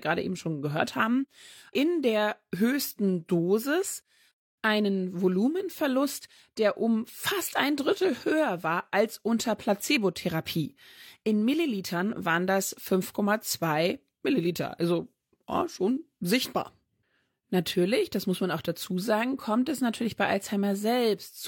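No technical faults can be heard in this speech recording.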